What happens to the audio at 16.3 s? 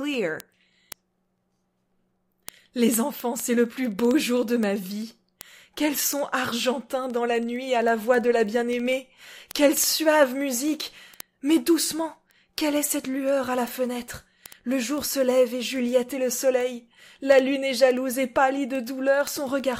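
At 16.3 s the audio carries word clock ticks, running from 0.14 to 19.80 s: sharp clicks roughly every 70 ms as unlocked clocks, several hundred ppm apart, drop or repeat single samples.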